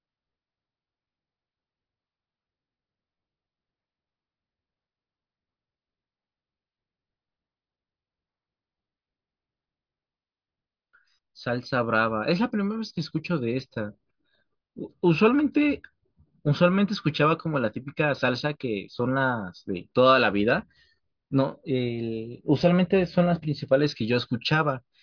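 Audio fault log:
No fault was heard in this speech clip.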